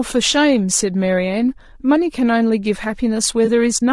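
Low-delay AAC compression runs through the whole clip, and its damage is plainly audible: the speech sounds rough and grainy, with noise filling the gaps between pitch harmonics and a thin, somewhat synthetic top band. The likely cause is AAC-ELD, the low-delay AAC used in video calls, at a rate that sounds like about 32 kbps. It codes about 500 frequency lines a frame with a low-delay window, and at this bitrate too few bits remain to code the detail cleanly.

AAC frame loss with concealment appears from 3.45 to 3.49 s as a brief smeared, noisy patch in the speech. About 20 ms of audio was missing, which fits a single lost frame. The decoder covered the gap by rebuilding that stretch from the last good spectrum, so the patch carries the preceding sound's energy with scrambled detail instead of a clean continuation. The loss is short, so the audio does not drop out to silence.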